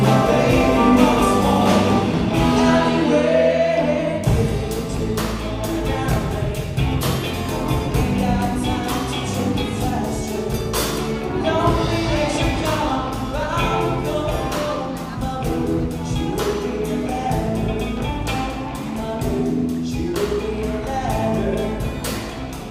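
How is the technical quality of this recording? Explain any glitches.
No glitches can be heard anywhere in the recording, and its technical quality holds steady throughout, with nothing interrupting or degrading the signal.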